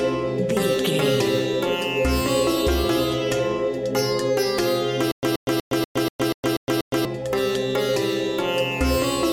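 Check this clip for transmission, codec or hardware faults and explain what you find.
There's one real problem here: a stutter with silent gaps from 5.12 to 7.05 s. A short fragment of about 127 ms plays, then about 115 ms of dead digital silence follows, and that cycle repeats eight times at a steady pace of roughly 242 ms. The likely cause is a stalled player or stream that replays its last buffered chunk on each retry and then runs dry, so whatever should have played during those two seconds is simply gone.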